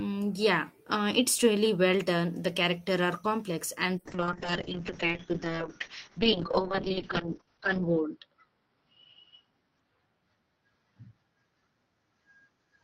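Right after "are complex and the" at 4.03 s, there's a call bitrate drop from 32 to 6 kbps, so the speech turns coarse and muffled, with highs cut from 20 kHz to 6 kHz.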